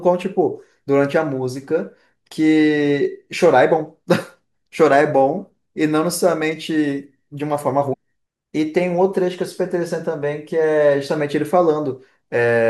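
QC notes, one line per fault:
7.92–7.94 s, compressed frames skipped. The speech jumps forward, and roughly a third of a second of audio is gone. A run of whole compressed frames was never decoded, either because they were missing from the stream or because the decoder rejected them as damaged. The size of the gap points to about ten frames dropped together.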